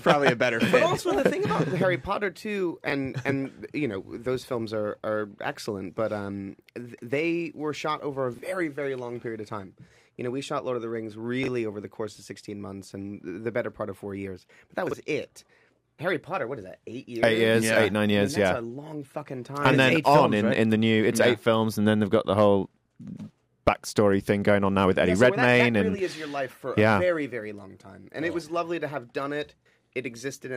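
From 0.1 s to the end runs a soft rattle of clock slip clicks, one sample dropped or repeated roughly fifty times a second. This likely comes from two unsynchronised clocks disagreeing by about 0.1%, so the error reaches a whole sample every 20 ms.

Chunks out of order appear at 2.88, 8.34, 11.44 and 14.87 s. In each, a block of about 21.33 ms plays one block late, or two at 14.87 s, so the sequence is swapped at hard joins, giving a brief jumbled moment.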